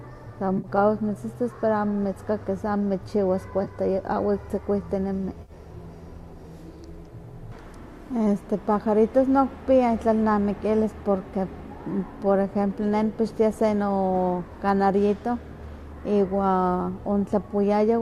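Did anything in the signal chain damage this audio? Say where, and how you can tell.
Yes. AAC frame loss with concealment, at the network stage. Smeared, phasey patches occur at 0.58 to 0.67 s (just before "mitzitas pero"), 3.64 to 3.67 s, and 5.42 to 5.52 s. The decoder filled each gap from the last good spectrum.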